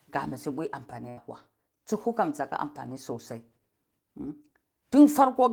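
At 1.09 to 1.19 s there is a burst of packet loss: a short run of packets never reached the player in time, so the receiver had nothing to play and carried the last sound forward instead. That concealment lasts about 74 ms, heard as a held, fading smear of the preceding speech, and when the stream resumes, roughly 80 ms of speech has been skipped, so the phrase jumps ahead abruptly.

At 2.97 s a block of digital silence appears: the output buffer was likely not filled in time, so about 2.7 ms of samples were left as zeros, which fits a 128-sample block. Because the speech drops to silence and returns with no fade, the two hard edges sit so close together that they merge into a single sharp tick rather than an audible hole.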